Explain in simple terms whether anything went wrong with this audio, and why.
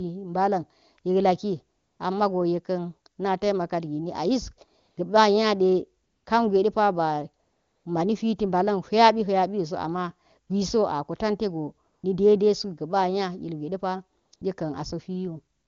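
Something did go wrong: AMR comfort noise kicks in nine times, from about 1.77 s to the very end at 15.67 s. Each time, the phone decided nobody was talking and stopped sending speech. The receiving end then filled the gap with smooth, made-up hiss instead of the real room sound. Most gaps are short, but the longest runs from 7.43 to 7.85 s. You can hear it right after "nya ilgwe de pa" too. The HD Voice sound itself stays clean.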